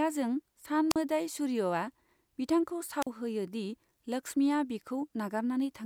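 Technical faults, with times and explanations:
0.90–0.96 s and 3.01–3.07 s, wireless microphone squelch dropout: the FM radio link fades, so the receiver's squelch shuts the output. Each time a short burst of hiss gives way to near silence lasting about 43 ms and 42 ms, with speech resuming on "होयो दि लक्ष्मीआ" after the second.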